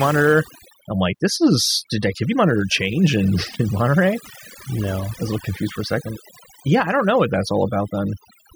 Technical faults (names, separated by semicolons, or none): overdone noise removal